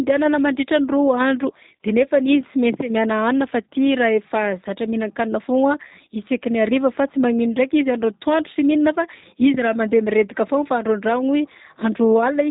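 Across the whole clip the speech sounds slightly rough, buzzy and synthetic, with nothing above about 3.8 kHz. This is G.729 codec damage: the voice is rebuilt from a vocal tract filter, a pitch predictor and a few pulses per frame, which fits 8 kbit/s G.729A.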